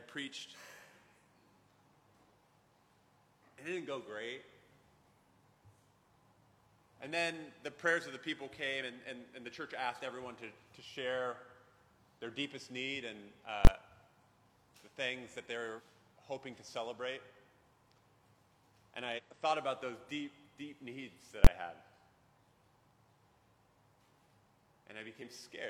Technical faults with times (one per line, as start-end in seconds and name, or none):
8.78-8.82 compressed frames skipped
13.65-13.67 invalid numbers at full scale
15.75-15.81 compressed frames skipped
19.14-19.20 compressed frames skipped
21.44-21.47 invalid numbers at full scale
25.17-25.22 compressed frames skipped